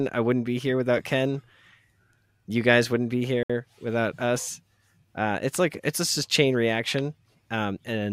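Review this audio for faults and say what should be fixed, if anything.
At 3.43 s, just after "guys wouldn't be", the speech drops to complete silence for about 65 ms and resumes at 3.50 s with "without us". The gap is a clean dropout rather than a fade or a glitch burst, and is likely a Bluetooth stall: radio interference delayed packets on the wireless link, the receiving headset's buffer emptied, and playback halted until the retransmitted audio arrived. To prevent it, record or monitor over a wired connection, or reduce interference and keep the headset close to the source device.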